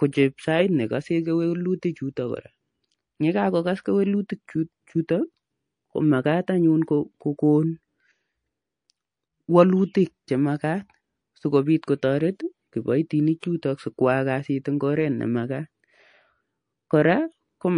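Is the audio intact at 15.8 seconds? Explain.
No. MP3 compression runs throughout the speech, so 15.8 s is affected too. The damage is plainly audible and likely comes from a low-bitrate encode, which fits roughly 40 kbps. Short of bits, the encoder switches weak frequency lines on and off, giving a watery, swirly sound, metallic chirps on s sounds and smeared attacks.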